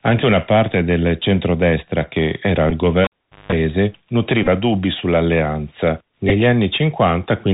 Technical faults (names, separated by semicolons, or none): Bluetooth CVSD headset codec; Bluetooth headset packet repeated; cable pulled and plugged in